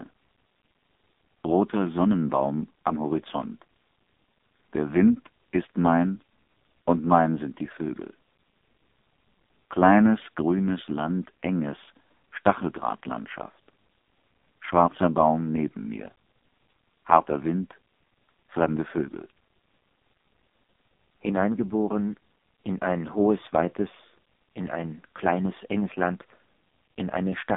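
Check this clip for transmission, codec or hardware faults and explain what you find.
Throughout the whole clip the speech sounds buzzy, boxed-in and synthetic, with no content above about 3.7 kHz and thin lows below roughly 200 Hz, the narrow 200 Hz to 3.6 kHz telephone band. This is the AMR narrowband mobile codec, heavily damaged. AMR-NB samples at 8 kHz and rebuilds the voice from a vocal-tract model excited by sparse pulses in 20 ms frames. The coarse, buzzy texture points to one of its lowest modes, around 5.15 kbps.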